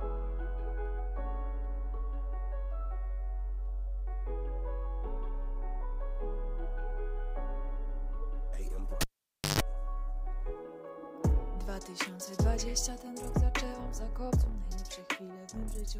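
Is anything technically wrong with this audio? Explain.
Yes. At 9.01 s a cable is pulled and plugged in, lasting until 9.60 s. A pop cuts the sound to near silence for about 0.54 s. Then a 50 Hz mains buzz runs about 0.14 s while only the tip makes contact. A second pop restores the audio.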